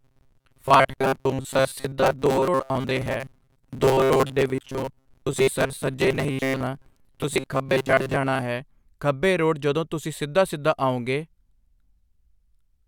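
From 0.01 s to 8.42 s the speech takes on a robotic sound from repeated short buffers: a rigid, metallic buzz at about 133 Hz that still tracks the rough shape of the words. The likely cause is audio arriving too slowly, so playback keeps looping a fragment of roughly 7.5 ms, one period of that buzz. Around two thirds of the passage is filled this way, with the missing material simply skipped.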